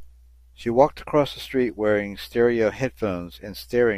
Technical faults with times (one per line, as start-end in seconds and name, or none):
none